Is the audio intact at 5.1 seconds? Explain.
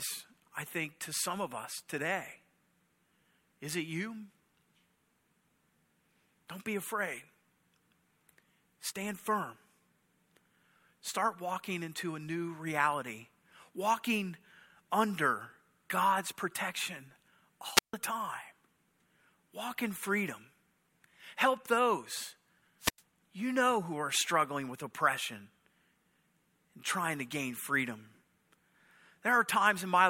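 Yes, the speech is intact at 5.1 seconds, with no dropout, click or other fault at that moment.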